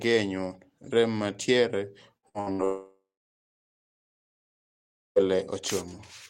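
From 2.17 to 2.61 s the speech suffers repeated packet loss, giving a robotic sound. Four short holes appear, the longest about 62 ms. Each is patched by stretching the previous sound. Roughly half this span is concealed, so it turns choppy.

At 2.64 s a long network dropout likely begins, lasting until 5.28 s. The last sound carries on briefly as a fading buzz or hiss. About 2.1 s of near silence follows. The speech then resumes, with the lost stretch never heard.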